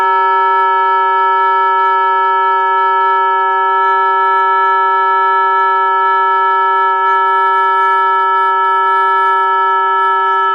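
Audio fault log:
Nothing stood out on listening to the recording.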